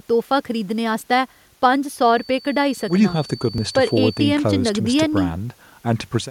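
From 1.96 to 4.34 s, a thin feedback whistle near 4.5 kHz sits about 20 dB below the speech. It likely comes from a loudspeaker-to-microphone loop hovering at the edge of feedback.

At 3.58 s, audio is missing between chunks. A few milliseconds vanish in a skip, likely lost while a 2-second processing chunk closed and the next opened.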